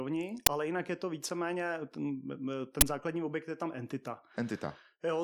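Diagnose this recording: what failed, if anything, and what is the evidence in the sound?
The uninitialised buffer fault sits at the driver or buffer stage: two loud cracks, at 0.46 s just before "ale jinak je to" and at 2.81 s before "základní objekt je tam". Each lasts about 12 ms, which fits a 512-sample block being played out before any audio was written into it, so leftover memory came out as samples.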